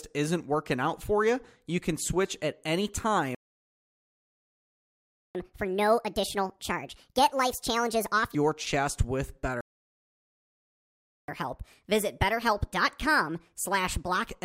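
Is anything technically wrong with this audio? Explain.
Yes, this speech clip has two playback stalls, each followed by catch-up at higher speed.

The first playback stall runs from 3.35 to 5.35 s, right after "can switch at any". The likely cause is that the player's buffer ran dry or its thread was held up, so nothing reached the output. The speech cuts off mid-phrase into two seconds of silence. The second stall, from 9.61 to 11.28 s just after "your chest with", is the same failure and lasts about 1.7 s.

After each stall the player plays its backlog faster by resampling to win back the lost time. Resampling raises pitch along with speed. From 5.35 to 8.35 s it runs at 1.5 times normal speed, leading into "your chest with", and the speech jumps up roughly seven semitones and sounds rushed and chipmunk-like. From 11.28 to 14.28 s it runs at 1.25 times speed, with a rise of around four semitones. 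After the first speed-up, the speech drops back to normal pitch and pace.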